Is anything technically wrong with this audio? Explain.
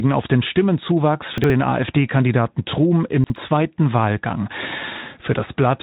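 Yes. Chunks out of order occur twice, from 1.38 to 1.50 s and from 3.24 to 3.36 s. In each case a 60 ms chunk arrived late by one position and was played after the chunk that should follow it. No audio is lost, but the order is swapped, creating three hard joins in each 120 ms span. Each event sounds like a brief jumbled stutter. The Speex-coded band, which ends near 3.8 kHz, carries through both events.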